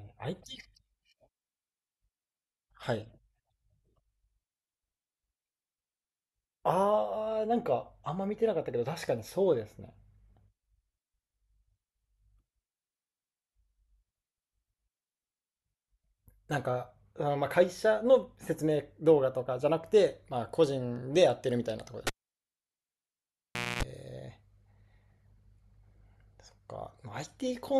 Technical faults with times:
22.07-23.83 cable pulled and plugged in

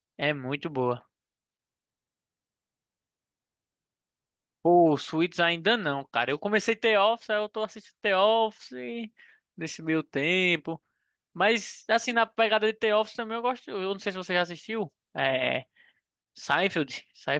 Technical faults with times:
none

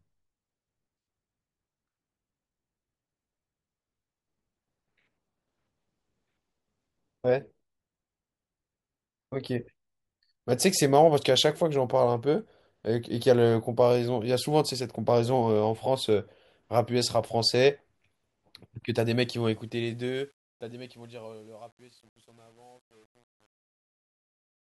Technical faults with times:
19.19-24.63 truncation distortion on a fade

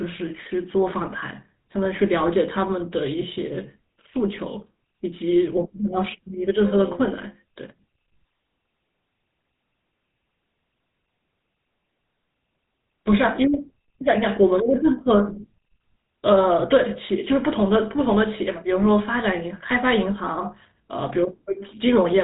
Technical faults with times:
0.00-22.23 GSM full-rate codec

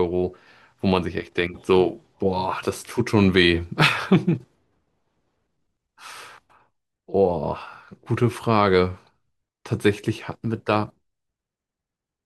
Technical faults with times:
none

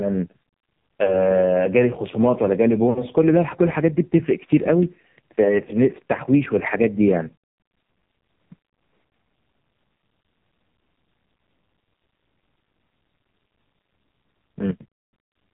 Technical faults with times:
0.00-15.53 AMR narrowband mobile codec
1.04-1.28 lost AMR speech frames
2.90-3.05 lost AMR speech frames
5.44-5.60 lost AMR speech frames
7.40 lost AMR speech frames
15.10 lost AMR speech frames

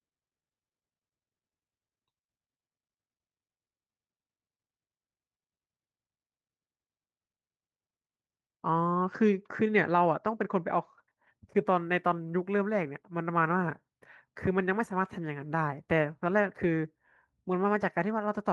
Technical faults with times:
none

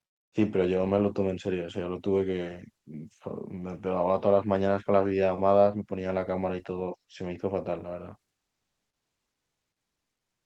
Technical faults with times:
0.06-0.32 comfort noise in place of the background
0.30-0.32 onset clipped by the voice detector

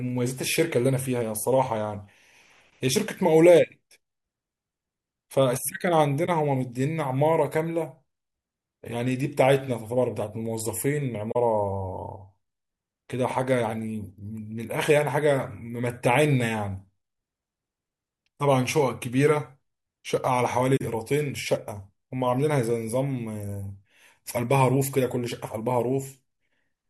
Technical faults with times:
6.26-6.29 corrupt frame concealed
11.31-11.36 corrupt frame concealed
20.76-20.82 corrupt frame concealed

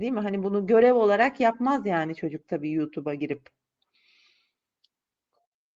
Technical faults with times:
none

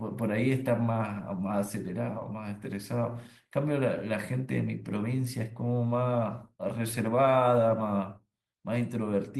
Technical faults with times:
none

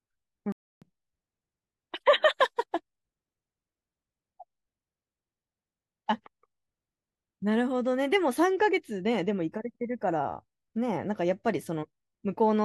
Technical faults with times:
0.52-0.82 playback stall

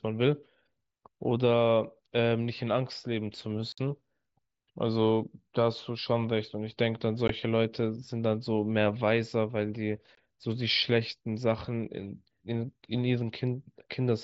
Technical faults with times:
3.72-3.78 unconcealed Bluetooth headset packet loss
7.28-7.30 unconcealed Bluetooth headset packet loss
10.15-10.18 unconcealed Bluetooth headset packet loss

